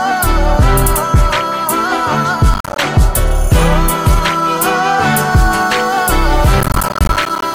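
From 2.54 to 2.78 s there's a burst of processor overload crackle. The processor keeps missing its deadlines, and each missed buffer drops out as a short hard-edged gap. The grain suggests buffers of around 10 ms, and a dozen or more fail, giving a quick gritty tear.

At 5.33 s a low bit depth with dither sets in and runs to the end. At 7 bits the dithered rounding error turns into a steady, even hiss about 30 dB below the signal, with no distortion.

Overload crackle returns from 6.61 to 7.42 s. It's the same silent-gap tearing but much longer, with several dozen buffers missed, and it sits on top of that hiss.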